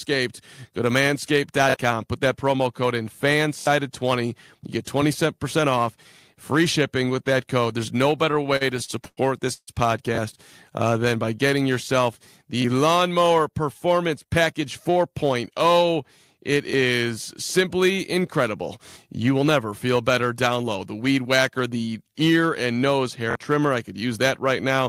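At 1.70 s, just before "put that promo code", there is a repeated buffer. Fresh audio failed to reach the output device in time, so it played its last block again. Each block lasts about 23 ms, which fits a 1024-sample buffer. Here it plays twice more, and roughly 50 ms of real sound is lost. Each repeat has a hard join, so it sounds like a quick stutter. At 3.60 s the same block repeats three extra times and roughly 70 ms goes missing.

From 8.31 to 9.69 s come repeated stalls, a stutter. Packets kept arriving late, and the jitter buffer ran dry twelve times. Each time the receiver stretched the last sound until data arrived. Together these fills total 400 ms, and nothing is actually missing. The longest wait is 144 ms. About 29 percent of this stretch is filled-in sound. The audio drags and catches.

From 10.98 to 11.35 s there is a jitter buffer slow-down. The receiver was short of reserve, so it repeated tiny pitch-length slices to gain time. 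It adds 53 ms and plays at 88 percent speed. The pitch stays put, but sounds drawn out.

At 12.62 s, right after "getting yourself", one block repeats once, and roughly 20 ms is lost. It is a brief stutter.

From 13.31 to 15.47 s comes a jitter buffer speed-up. Too much audio had built up, so the receiver cut short pitch-length pieces again and again. The audio runs at 107 percent speed, with roughly 150 ms removed. The pitch holds steady, but the pace feels hurried.

The remaining repeated buffers fall at 16.71, 18.89 and 23.31 s. At 16.71 s there is one extra play, with roughly 20 ms lost. At 18.89 s there are three, with roughly 70 ms gone. At 23.31 s, between "the ear and nose" and "trimmer I could use", there are two, with roughly 50 ms lost.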